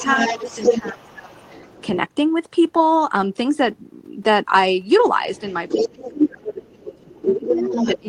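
From the start to 1.86 s, a second voice runs under the main speech. This is the other side's voice leaking through. It sits only a little below the talker. The likely cause is an echo canceller that left part of the loudspeaker signal in the microphone feed. Inside that stretch, the main speech is pushed down twice. At 0.38 to 0.44 s it dips briefly and moderately. From 0.82 to 1.39 s it drops much deeper, for about half a second. This is speech suppressed in double talk. Both sides are speaking at once. The canceller likely cannot tell its own talker from the echo, so it turns everything down. At 5.22 s the leaking voice returns and lasts to the end, again only slightly quieter than the talker. From 5.76 s to the end, the main speech is held down deeply under it.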